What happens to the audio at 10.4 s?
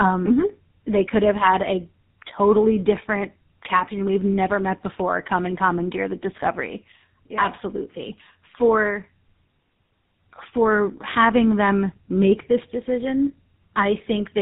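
At 10.4 s, as throughout, tandem speech coding is audible: two low-rate speech codecs in series, which fits AMR then GSM full rate, compound their losses. The result is rough, warbly speech with nothing above 3.8 kHz.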